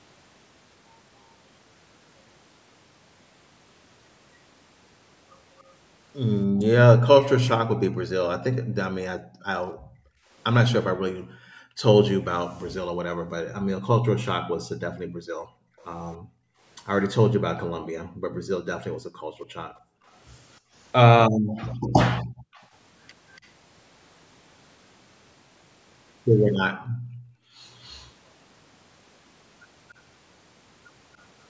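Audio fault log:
5.58–7.26, 15.78–17.08, 21.56–23.48 and 26.54–28.1 s, echo leak: the other end was likely playing the call on a loudspeaker, and its echo canceller did not strip everything its microphone picked up, so the leftover was sent back. What comes through is a copy of the speech trailing it by 285 ms each time. It is faint in the first two spans, at about -30 and -35 dB relative to the speech, and stronger at about -20 dB at 21.56 s and about -25 dB at 26.54 s.
6.47–22.53 and 26.76–27.61 s, background gated by the echo canceller: while the loudspeaker was playing, the canceller turned the microphone down hard, by as much as about 40 dB, and the room sound drops out with it. It returns each time the canceller lets go. Across the long first span these dips add up to roughly five seconds. The second dip falls inside the 26.54 s echo and lasts under a second.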